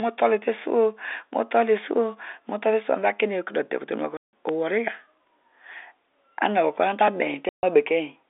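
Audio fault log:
4.17–4.33 s and 7.49–7.63 s, packet loss filled with silence: the sound drops to dead silence for 160 ms, then 140 ms, with hard edges. Both lengths fit 10 ms packets.
4.49 s and 7.08 s, dropped buffer (overrun): each is a small jump forward with no silence. A few milliseconds are skipped, likely because samples were overwritten before being read.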